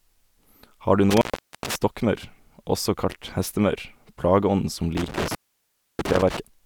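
Around 1.1 to 1.76 s the speech drops out for roughly 435 ms, and again from 4.97 to 6.37 s for about 643 ms: classic intermittent contact, a loose plug or cable briefly opening, so each gap is edged with crackle and filled with faint hiss.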